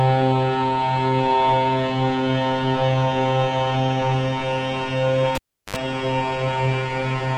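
Cable pulled and plugged in, from 5.35 to 5.76 s: a live lead is yanked out and reinserted while the sound is running. A sharp pop marks the disconnection, then the signal drops to near silence for about 360 ms. As the plug goes back, its tip makes contact before the shield grounds, so a 50 Hz mains buzz of about 65 ms cuts through. A second pop follows as the connection seats and the sound returns.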